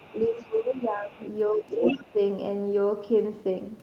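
From 0.0 to 0.57 s a faint second voice, roughly 30 dB below the talker, sits underneath, with a quieter scrap from 0.78 to 0.83 s. This is the other side's voice leaking through, likely loudspeaker echo the canceller left in the microphone signal. Overlapping it, from 0.1 to 1.21 s, the talker's level sinks by as much as 15 dB. This is speech suppressed in double talk, likely the canceller turning everything down while both sides spoke. It happens again from 1.49 to 2.19 s with shallower dips of about 10 dB, while the leaking voice returns from 1.67 to 2.13 s nearly as loud as the talker.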